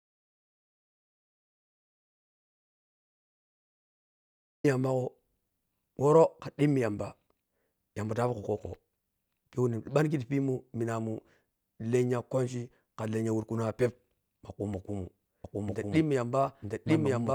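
A speech recording whose input was likely lost or muted when capture began, so silence was written in place of signal: the clip opens in dead silence with no room tone, and speech only arrives at 4.64 s with "yamba go". This is an audio dropout to silence, and whatever came before that point is missing. From 15.44 s to the end there is a doubled audio track, likely from a second, slower capture path or an edit that left two copies out of step. A full-band duplicate of the speech runs about a second behind at roughly equal loudness. It has no decay or room colouring, and it switches in abruptly.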